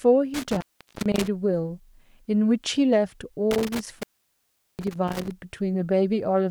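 A loose cable or plug in this speech recording is breaking contact, an intermittent contact fault that happens twice. Between 0.34 and 1.28 s the connection drops open for about 0.41 s, and between 3.51 and 5.31 s it opens for about 0.76 s. Each time the speech cuts out abruptly, with crackle as the contact breaks and remakes, and a faint hiss remains while the line is open.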